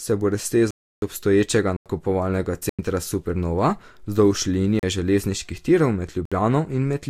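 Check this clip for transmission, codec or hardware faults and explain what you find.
The speech drops out abruptly five times, each a block of digital silence. The dropouts fall at 0.71–1.02 s (315 ms, just after "se bo"), 1.77–1.86 s and 2.69–2.79 s (93 ms each), 4.79–4.83 s (36 ms, just before "železniških tirov"), and 6.25–6.32 s (62 ms, just after "železniških tirov"). The longest is a clear hole. Samples were replaced by zeros with no fade, likely because the output buffer wasn't filled in time. The two identical 93 ms gaps fit a 4096-sample buffer.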